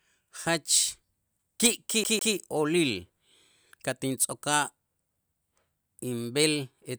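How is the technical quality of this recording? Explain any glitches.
The recording has one clear glitch, a CD stuck on one turn, from 2.04 to 2.35 s. A scratch throws the laser back one track at the same point on each revolution, so a 155 ms slice of speech plays twice with a brief mute between. On a spectrogram this shows as two identical blocks separated by a thin silent vertical gap, heard as a quick mechanical stutter.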